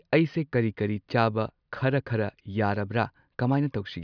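No technical faults are audible.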